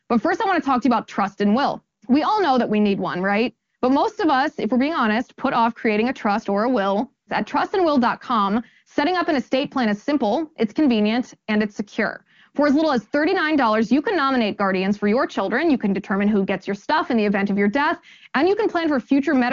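No technical faults can be heard in this speech, which comes through the AMR wideband (HD Voice) codec at a high rate, with nothing above about 7.1 kHz.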